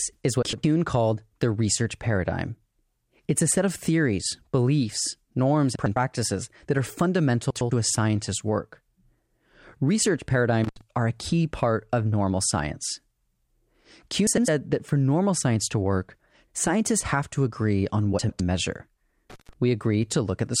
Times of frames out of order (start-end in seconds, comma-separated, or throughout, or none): 0.42-0.64, 5.75-5.96, 7.51-7.71, 14.27-14.48, 18.19-18.40